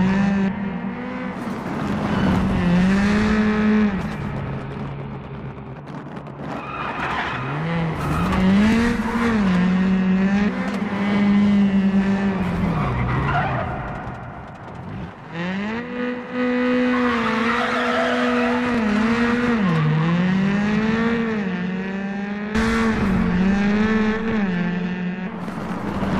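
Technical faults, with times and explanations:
8.73–8.75 s and 18.74–18.77 s, overlapping chunks: at each of these two joins you get a quick little stutter or click. The audio seems to be handled in 10-second chunks, and each new chunk kicks off about 20 ms before the previous one finishes, so that sliver plays twice back to back. The doubled bit breaks the waveform's continuity, which is why it comes across as a tick rather than an audible echo, recurring every 10 s.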